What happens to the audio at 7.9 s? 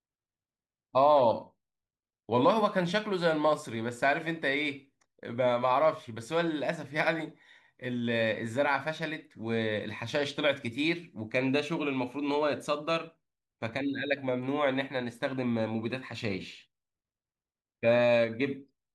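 Nothing goes wrong at 7.9 s; the speech runs through that moment intact, with no dropout, click or distortion.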